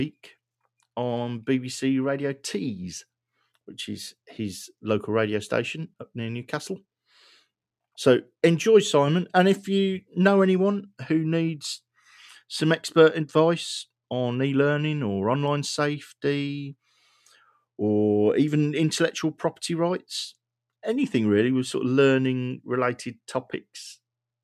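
Between 16.97 and 17.49 s there's a stretch of sound cut by the noise suppressor. The suppressor misjudged part of the signal as background noise and pulled its gain down harder than everything around it, by about 10 dB at the deepest point. Altogether roughly a third of a second is affected, so you hear a brief sag where the sound thins out and drops back before recovering.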